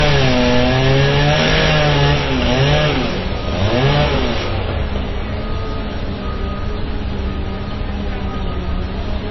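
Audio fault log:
Throughout, transcoding between lossy codecs: nothing above 5.8 kHz and mixed watery, smeared artefacts, likely low-bitrate MP3 re-encoded as Vorbis, stacking both codecs' damage.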